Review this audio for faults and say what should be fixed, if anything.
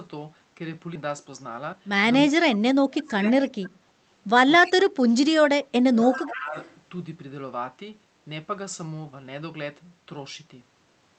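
At 0.95 to 0.97 s the speech has a skip ahead: roughly 0.4 s of speech is missing and the two sides are spliced with no gap and no fill. This is unlike a dropout, which leaves silence or a concealment smear. To prevent it, the jitter buffer should be sized so it doesn't overflow and discard queued audio.

Speech suppressed in double talk occurs at 2.29 to 3.26 s, 4.65 to 5.90 s and 6.06 to 6.56 s. The talker dips by up to about 30 dB, most likely because the echo canceller ducked both sides while they overlapped. Unlike a network dropout, the dips follow the other side's activity rather than packet timing. To prevent it, the far-end echo canceller and suppressor should be tuned for double-talk tolerance.

An echo leak can be heard at 3.03 s, 3.43 to 3.70 s, 4.67 s, 6.11 to 6.40 s and 6.61 to 6.77 s. A copy of the speech returns 275 ms late, about 15 to 30 dB below the direct sound. This is likely loudspeaker pickup that the remote canceller failed to remove. 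The fixed delay separates it from room reverberation, which trails off continuously. To prevent it, the canceller's delay estimate should be corrected, or a headset used at that end.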